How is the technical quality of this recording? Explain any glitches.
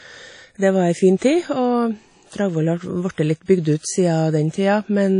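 The recording has one fault, present from start to finish.

Low-bitrate audio saved at a high bitrate, throughout: the speech has nothing above 10.1 kHz, a hard ceiling that leaves it dull and slightly muffled, with the thin, smeared texture of heavy compression. The cause is likely an earlier low-bitrate encode, one that points to something like 32 kbit/s WMA, later re-saved as a high-bitrate MP3. The second encode preserves the damage but cannot restore the detail the first one discarded.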